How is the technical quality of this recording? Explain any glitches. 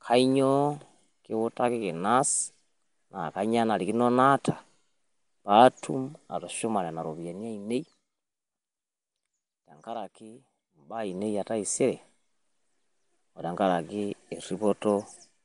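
The quality is held back by audible codec damage throughout. From start to finish there's a rough, hissy halo and a smeared, underwater quality, and nothing above 10.6 kHz. That points to Nellymoser compression, the old Flash mic codec, likely at around 44 kbps. It codes 256-sample blocks at a fixed bit budget, so weak bands get no bits and are filled with noise.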